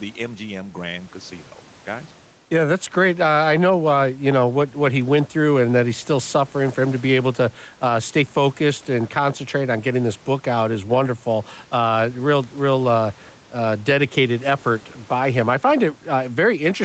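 Gain pumping throughout: the gain ducks about 5 dB under loud syllables, likely from an overdriven limiter, leaving a flattened waveform envelope.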